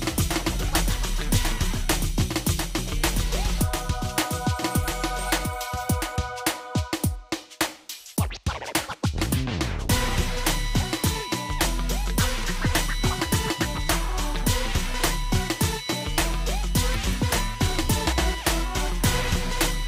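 The audio carries a doubled audio track from the start until 6.16 s, where the copy stops abruptly. A second, full-band copy trails by around two seconds, about 5 dB quieter, with no decay or room colour. The likely cause is a slower second capture path or an edit holding two misaligned copies.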